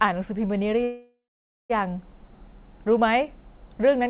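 From 0.84 to 1.72 s, a call audio freeze, likely from delayed packets, fades into about 0.54 s of silence, then resumes where it stopped, with nothing lost.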